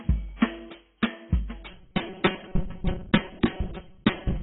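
Throughout the music there is heavy damage that likely comes from AAC compression, AAC-LC at a rate that fits about 16 kbps. Nothing remains above about 3.9 kHz, so the sound is dull and smeared. A spectrogram shows a hard, flat ceiling there, with coarsely quantised energy below it.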